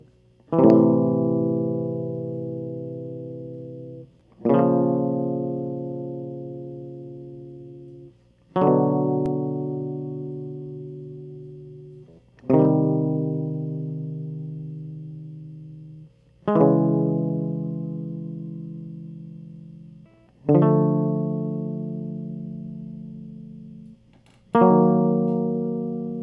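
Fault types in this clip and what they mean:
There are no fault types in this music clip.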